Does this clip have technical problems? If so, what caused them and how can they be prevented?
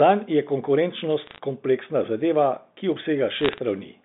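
Yes. Bursts of sharp ticking crackle sit on the speech from 1.27 to 1.39 s, just before "kompleksna zadeva ki", and from 3.40 to 3.58 s, just after "kompleksna zadeva ki". These are bit errors on a digital phone line: at roughly 0.3 percent of bits flipped, individual G.711 samples jump to wrong values, and each hit on a high-order bit, or on the sign of a loud sample, becomes a click. Using a cleaner line, or error detection and correction on the digital link, would prevent them.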